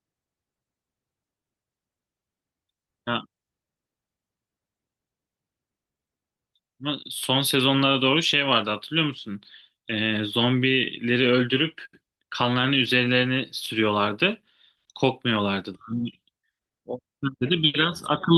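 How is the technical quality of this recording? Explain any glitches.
No glitches turn up anywhere in the recording, so there is nothing to explain. The speech carries the light touch of Opus voice compression working in its hybrid mode, with the full frequency band kept.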